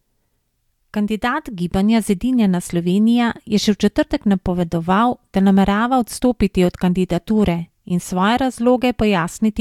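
No technical faults can be heard anywhere in the recording.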